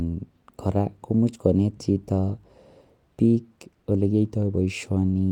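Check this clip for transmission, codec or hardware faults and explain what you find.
No faults found.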